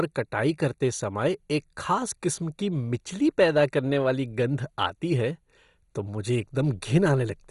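From start to finish, starved MP2 compression is the likely cause: too few bits, roughly what 56 kbps gives, switch off the upper sub-bands and coarsely quantise the rest. Nothing remains above 11.2 kHz, so the speech sounds dull, gurgling and granular.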